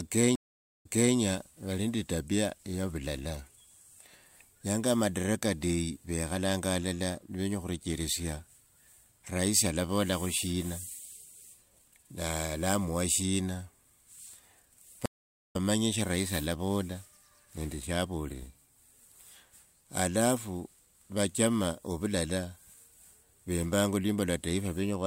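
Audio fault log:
0.35–1.16 s and 15.06–15.56 s, stream reconnect: the speech cuts to silence for about half a second each time (491 ms, then 477 ms). After the first gap, about 313 ms of speech repeats before "vali nende etapia ya". After the second gap, roughly 300 ms is skipped before "sha rahisi alavola nende". Each time the connection dropped and the player restarted its decoder mid-stream, picking up from a resent earlier chunk the first time and from the live position the second.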